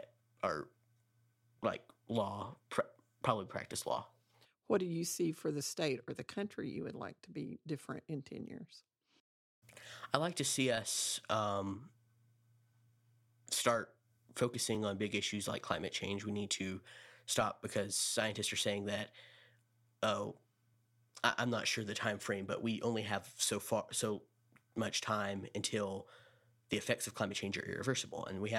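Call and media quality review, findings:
Audio missing between chunks: chunked capture or processing likely drops a few milliseconds at each 6 s boundary, with the two sides spliced directly together and no gap. Symptom: brief skips in the speech at 2.76 s (just before "probably practice law"), 8.76 s, 14.75 s (just before "on big issues like"), 20.74 s and 26.74 s. Evenly spaced, each too short to take out a word, heard as a small jump in the audio.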